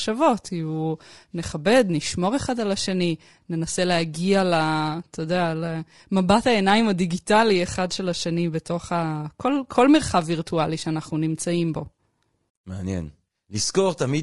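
The speech has most likely passed through low-delay AAC compression of the AAC-ELD kind used in video calls, whose short frames resolve pitch harmonics poorly. Throughout, the voice sounds plainly rough and grainy, with noise between harmonics, which fits a bitrate around 32 kbps.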